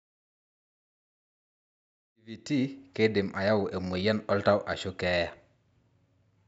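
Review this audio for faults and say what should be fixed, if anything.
Nothing to fix: the speech carries the normal call microphone processing, with no content above 8 kHz, and opens on a deliberate smooth fade-in from about 2 s to 2.84 s.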